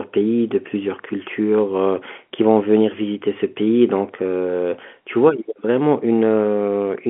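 Nothing stood out on listening to this speech clip, which carries the narrow band of a G.711 A-law telephone line.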